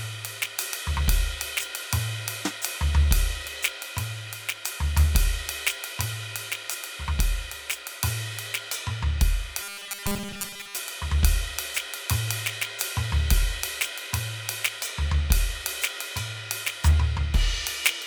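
From 9.61 to 10.76 s the music becomes a rigid 200 Hz robotic sound, likely from repeated 5 ms buffers. Unlike dropouts, it never falls silent.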